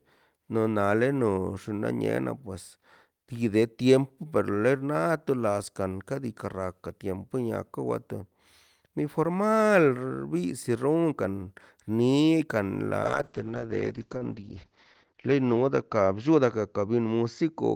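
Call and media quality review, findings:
Call bitrate drop, 13.05 s to the end: speech goes muffled and rough, top cut to 8 kHz. Sounds like the encoder fell from about 32 to 8 kbps, bottoming out for 1.75 s.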